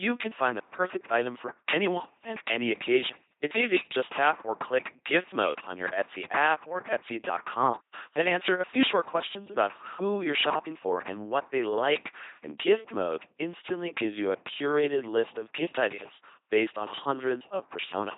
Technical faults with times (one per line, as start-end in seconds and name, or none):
0.00-18.18 LPC-10 vocoder
7.81-7.93 digital wireless dropout